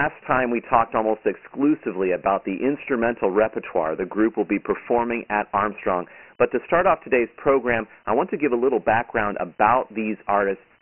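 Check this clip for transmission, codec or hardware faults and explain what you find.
One codec fault runs through the whole clip: Dialogic VOX ADPCM, heavily damaged. The speech is squeezed into a telephone-style band of roughly 200 Hz to 3.5 kHz, and nothing is audible above 3 kHz. That lower ceiling fits the 6 kHz sampling of the 24 kbps VOX mode. Each sample is coded as a coarse 4-bit step, so a gritty hiss rides on the speech and rises and falls with it. That sets it apart from ordinary narrowband telephone coding, which reaches about 3.4 kHz.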